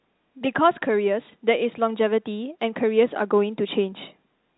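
No faults can be heard in this speech recording.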